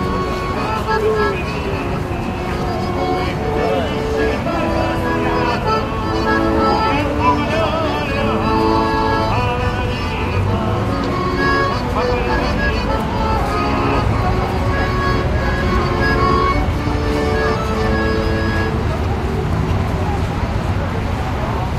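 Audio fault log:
No faults can be heard anywhere in this recording.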